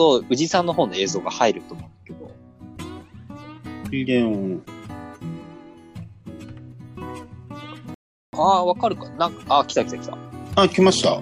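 The audio stops dead at 7.94 s and sits in silence until 8.33 s, a rebuffering stall of about 0.39 s in which playback ran out of downloaded data and waited for more to arrive. What separates it from a dropout or packet loss gap is that nothing is missing: the sound picks up at exactly the point where it halted, so the stall only adds 387 ms of dead time.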